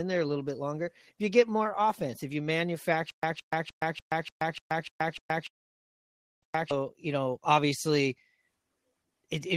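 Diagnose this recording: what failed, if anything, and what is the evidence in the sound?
Stutter with silent gaps, 3.1 to 6.71 s, just before "you know obviously": a 166 ms fragment repeats nine times, each followed by 130 ms of digital silence, a steady 296 ms cycle. This is likely a stalled playback or stream buffer replaying its last chunk on each retry; the audio due in that span is lost.

Call audio freeze, 5.47 to 6.45 s: the sound halts and about 0.95 s is filled in, almost all of it (930 ms) silent, before the audio resumes exactly where it stopped, with nothing missing. This is likely late packets draining the call's jitter buffer on the network path, inserting a gap.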